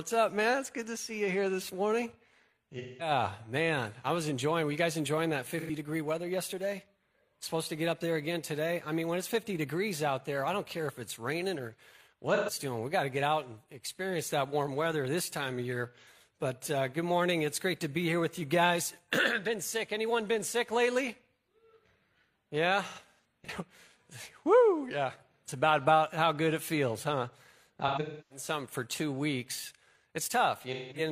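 The audio has seven dropouts from AAC frame loss with concealment, at 2.78–3.11 s, 5.60–5.70 s, 12.34–12.51 s, 16.01 s, 22.88–23.49 s, 27.87–28.45 s and 30.73–31.01 s. Each time, the decoder patches over missing frames by reusing the last good spectrum, so you hear brief smeared, phasey or noisy patches. The later three are scattered clusters, and the one near 28 s has a run of about 300 ms.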